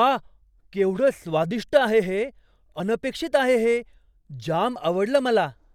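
At 2.80 s, after "केवढं स्वादिष्ट आहे हे", and again at 4.76 s, an overlap between stream segments drops 8 ms and then 18 ms at 1 s segment joins, causing brief skips.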